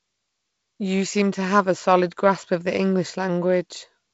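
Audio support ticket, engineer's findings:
No faults found.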